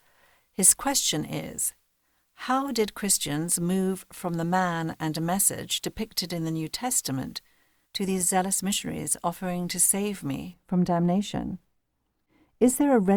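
De-emphasis applied wrongly affects the speech from 10.54 s to the end of the clip at 13.16 s. A treble-reducing filter, intended to reverse a pre-emphasis boost, has been applied where no such boost existed, or applied twice, so the high end is pulled down on a smooth slope, reaching about 11 dB lower at 10 kHz than at 1 kHz. Over this final stretch the sound turns dull and muffled, losing its crispness and air.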